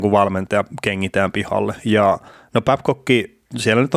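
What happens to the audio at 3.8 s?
Nothing goes wrong at 3.8 s; the speech there plays through intact, with no dropout, click or distortion.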